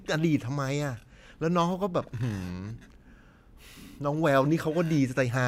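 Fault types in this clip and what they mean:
No technical faults can be heard in this speech recording.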